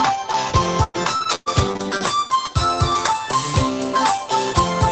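Call audio, band-limited to about 8 kHz, turns choppy from 0.83 to 2.31 s because of repeated packet loss (robotic sound). Eight gaps, the longest 109 ms, were patched by extending the preceding sound. On a spectrogram this shows as smeared, repeated slices and brief dropouts.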